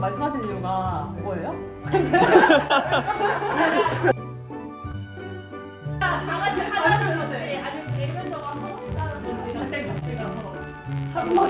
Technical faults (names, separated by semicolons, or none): short concealed packet loss; filter restarted on every block